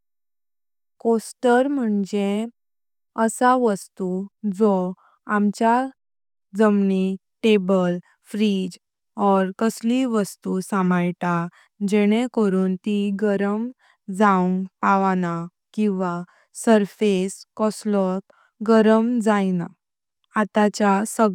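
A recording of speech with no technical faults to report anywhere in the signal.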